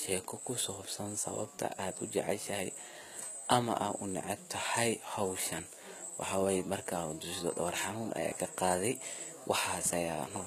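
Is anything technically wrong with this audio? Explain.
Yes. Throughout, the treble sounds rebuilt rather than recorded: sibilants turn gritty and metallic, and nothing remains above 14.9 kHz. This is likely HE-AAC compression at a low rate, which fits about 20 kbps, copying lower bands upward.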